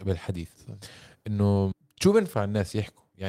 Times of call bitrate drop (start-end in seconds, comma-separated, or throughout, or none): none